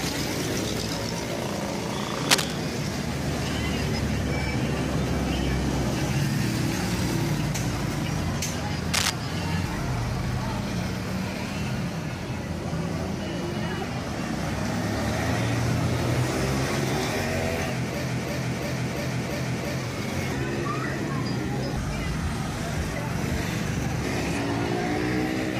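At 2.29 to 2.52 s, and again at 8.93 to 9.10 s, bursts of cable scratch noise cut across the sound. They are dense, ragged and roughly 5 dB above it. A worn cable or connector being moved, changing its contact resistance, is the likely cause.

From 18.09 to 19.80 s, a system hang loop takes over. The system stalled while the hardware kept replaying one buffer. A 341 ms slice repeats five times at 2.93 Hz, which fits a 16384-sample buffer. It sounds like a slow, mechanical stutter.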